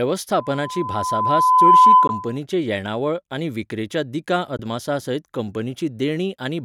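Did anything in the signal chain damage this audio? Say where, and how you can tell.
Yes. At the acoustic stage, a microphone picked up the loudspeaker it was feeding, and the loop's gain passed unity at 1 kHz. From 0.38 to 2.38 s a pure 1 kHz tone swells over about a second and a half to roughly 15 dB above the speech. It then cuts off just before "येणावळ आनी विक्रेच्या दिकां". That is loudspeaker feedback squeal.

At the wireless link, two brief holes open, at 2.07 to 2.10 s and at 4.57 to 4.61 s, the second just after "येणावळ आनी विक्रेच्या दिकां". Each matches a lost 15.2 ms frame, and the speech resumes as if it had kept playing, so a Bluetooth dropout is the likely cause.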